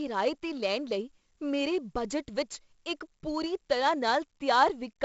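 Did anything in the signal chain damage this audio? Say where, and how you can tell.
Yes, at the codec stage: this speech has been through 4-bit ADPCM compression. A gritty hiss rides on every loud syllable across the whole clip, attacks sound rough where the step size lags, and nothing sits above 7.7 kHz, which fits a low 16 kHz rate around 64 kbps.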